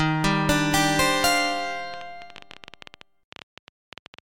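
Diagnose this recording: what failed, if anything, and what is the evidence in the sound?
A train of clicks runs from 1.94 s to 4.2 s, about 30 sharp ticks at roughly 12 per second, spaced unevenly and peaking a few decibels above the sound itself, audible in gaps as well as over the programme. Because the pulses share much the same shape and recur for over two seconds, the likely source is interference coupling into the analogue wiring from nearby equipment, or a faulty connection or power supply injecting repeated transients.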